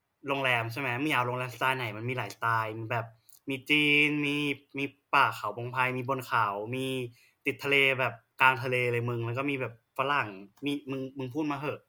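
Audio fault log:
No faults are found in this speech clip.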